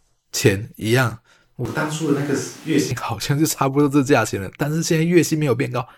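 From 1.66 s to 2.91 s the speech turns abruptly roomy, hollow and thin, about 5 dB quieter, with room noise around 25 dB below it, then snaps back. This is likely a switch to a distant microphone. A plain gain dip would keep the bass and dryness.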